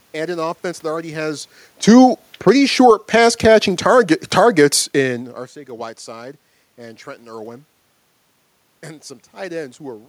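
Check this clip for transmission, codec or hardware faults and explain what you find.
One fault stands out: automatic gain falling. From 1.73 to 5.26 s, just after "offense that already has", the gain control judges the input too loud or its background noise too strong and lowers gain gradually, by about 8 dB. Speech and room noise sink together. A waveform shows a steadily tapering envelope, and a spectrogram dims evenly across all frequencies, background included. The level shifts near 1 s and 5 s, where the talker moves, change only the voice.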